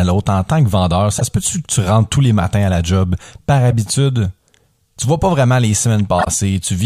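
Corrupt frames decoded at 1.18–1.22 s after "en tant que vendeur", 3.71–3.73 s after "la job par", and 6.19–6.28 s after "vois pas vraiment les": damaged compressed frames were played anyway, putting misplaced energy into loud chirps or bursts of noise, the last the strongest.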